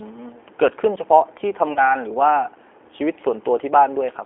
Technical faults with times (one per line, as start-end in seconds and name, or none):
0.00-4.25 G.729 codec
1.73-1.95 VoIP packet loss concealed by the speech codec